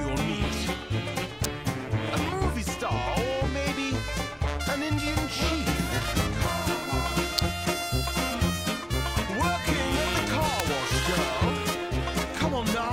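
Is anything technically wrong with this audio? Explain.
Yes. Three electrical switching spikes cut through the audio, at 1.44 s, 7.38 s and 10.6 s. Each is a sharp snap lasting only a few milliseconds. It sits on top of the sound rather than replacing it. The peaks reach roughly -5 dBFS. The likely cause is a nearby switch, motor or static discharge arcing briefly. The audio line picks that arc up as a burst of interference.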